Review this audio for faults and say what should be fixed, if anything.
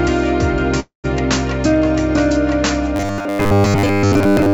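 From 0.80 to 1.06 s there is a call audio freeze: the last sound stretches into a fading buzz, falls to about 130 ms of silence, then resumes exactly where it stopped. The likely cause is delayed packets draining the jitter buffer, inserting a 0.24 s gap while losing nothing.

From 2.96 s to the end at 4.53 s, the sound turns into a rigid, metallic buzz locked at 100 Hz, the robotic sound from repeated short buffers. New audio is likely arriving too seldom, so short 10 ms chunks are replayed to fill time, and most of that stretch is repetition rather than fresh audio.

To prevent both, stabilise the network path and give the jitter buffer enough adaptive headroom to absorb delay spikes without running dry.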